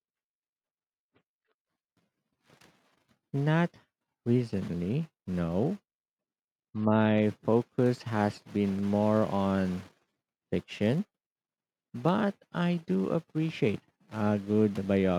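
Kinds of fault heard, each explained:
Nothing stood out on listening to the speech here.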